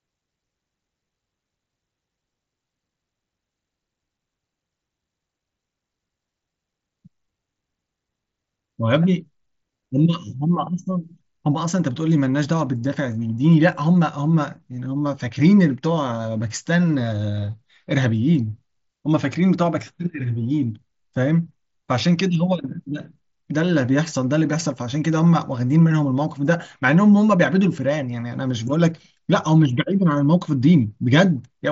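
Nothing stood out on listening to this speech clip, which comes through a Bluetooth mSBC headset codec with nothing audible above about 7.7 kHz.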